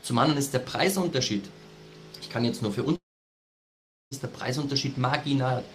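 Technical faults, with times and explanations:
2.95–4.14 s long network dropout: a brief fading buzz, then about 1.1 s of silence, likely from lost packets. The waveform flatlines and the spectrogram goes blank.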